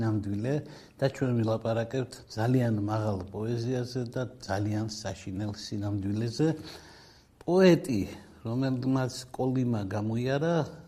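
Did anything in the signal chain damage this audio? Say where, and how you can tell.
Yes: a corrupt frame decoded at the codec stage, 1.11 to 1.15 s, a brief, fairly quiet glitch where flipped bits in a few compressed frames placed energy at the wrong frequencies.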